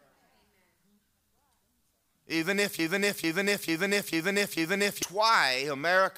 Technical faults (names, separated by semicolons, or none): broken-record loop